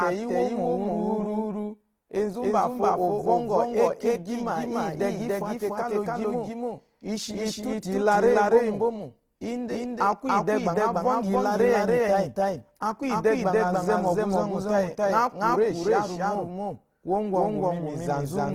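From start to finish the speech is heard twice: a doubled audio track, with a second full-band copy at roughly the same level trailing by about a third of a second. It is likely an out-of-step duplicate path. On a waveform every burst repeats, offset by roughly 300 ms, with no decay.

Throughout, the speech is also rough and grainy, with hissy, noise-filled upper bands. This is plainly audible Opus compression damage. It is likely Opus in its music mode at a starved rate, which fits about 16 kbps. A spectrogram shows smeared, speckled energy reaching to about 20.2 kHz.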